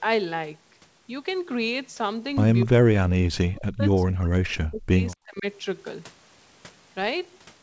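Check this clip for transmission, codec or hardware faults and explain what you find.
Two faults are audible: a short echo leak heard twice, and the talker being suppressed during double talk. The sound stops at 8 kHz, as expected for a wideband call path such as G.722.

Echo leak, 2.60 to 2.66 s and 5.11 to 5.16 s: the far end's echo canceller likely missed some loudspeaker pickup. This sends back a faint copy about 244 ms late, roughly 25 dB and then 35 dB below the speech.

Speech suppressed in double talk, 2.65 to 5.46 s: with both sides talking, an echo canceller likely attenuated the talker along with the echo. Over about two seconds in total, the speech drops as much as roughly 40 dB, in pieces.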